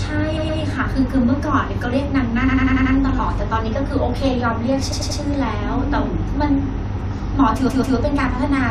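Repeated frames stutter at 0.36–0.59, 2.47–2.94, 4.91–5.19 and 7.68–7.95 s: the same 93–139 ms block replays identically. Unlike concealment after packet loss, nothing drops out and the sound runs longer.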